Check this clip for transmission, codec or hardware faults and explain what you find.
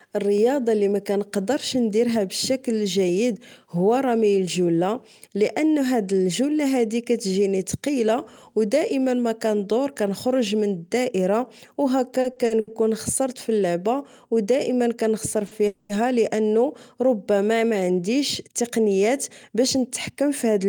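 Four network-timing faults affect the speech in the second half of the clip. All of them come from packets arriving off schedule. Only the speed-up removes audio.

From 12.21 to 12.69 s there are repeated stalls, a stutter. The jitter buffer ran dry four times in under half a second. Each time the receiver kept the last sound going until fresh packets came in. About 180 ms was filled this way, roughly 37% of that stretch. The longest gap was 70 ms. The speech drags and catches. Nothing is lost, but the flow breaks up.

From 15.47 to 15.53 s a short stall from a late packet holds one sound too long. The packet missed its slot, so the receiver stretched what it already had. It then resumed at the same point. About 40 ms was filled in, and the delay grew by the same 40 ms. The result is a brief held moment with a faint buzz or dip.

From 15.67 to 15.91 s there is a call audio freeze. The last sound carries on as a buzz or hiss that fades, for about 220 ms. 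It never drops to silence. Then the speech picks up exactly where it stopped. The likely cause is packets held up in transit, which emptied the buffer. The gap is inserted, not cut, so the delay rises by 220 ms and nothing is missing.

From 17.71 to 20.67 s a jitter buffer speed-up is at work. The buffer held more audio than its target. The receiver trimmed tiny pitch-period slices, again and again, to catch up. Around 150 ms was removed in total. The speech runs about 5% fast at unchanged pitch. It sounds slightly hurried.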